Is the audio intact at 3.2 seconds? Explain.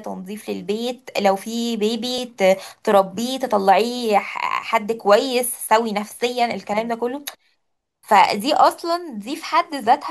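Yes, the speech at 3.2 seconds plays through intact, with no dropout, click, distortion or other fault at that moment.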